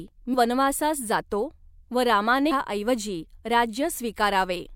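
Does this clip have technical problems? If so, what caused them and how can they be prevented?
Yes. Damaged data in a compressed stream breaks the speech twice, at 0.30–0.35 s and 2.47–2.52 s. Each is a 44 ms glitch where corrupted frames are misread and the decoder loses sync before locking back on. A spectrogram shows each as a brief disruption, and the waveform shows an abrupt discontinuity. Verifying checksums during storage and transfer, and re-fetching any file or stream segment that fails, prevents it.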